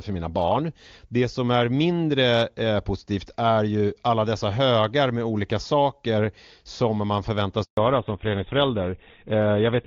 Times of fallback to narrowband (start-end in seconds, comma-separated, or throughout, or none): 7.77-9.86